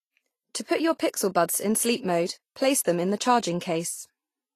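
Throughout the speech, likely Vorbis compression at a bitrate near 31 kbps leaves a grainy, hissy treble; a spectrogram shows nothing above 14.2 kHz and speckled high bands.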